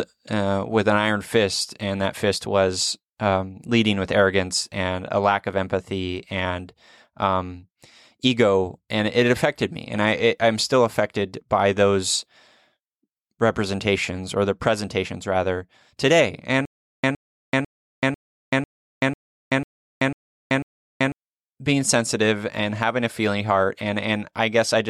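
Speech recording with stutter with silent gaps from 16.65 to 21.12 s, after "the presentations rather today": a 114 ms burst repeats nine times, every 496 ms, separated by 383 ms of digital silence, likely a stalled stream replaying its last fragment.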